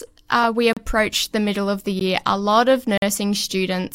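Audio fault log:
0.73–3.02 s, block of digital silence: the audio drops to silence three times with no fade. At 0.73–0.77 s (35 ms, after "uh we") and at 2.98–3.02 s (46 ms, after "a lot of"), it is heard as a short hole. At 1.99 s (14 ms, after "the middle of the"), the gap is heard as a single tick. The 46 ms gap fits a 2048-sample buffer left unfilled in time. Unlike a concealed dropout, nothing is smeared or faded in.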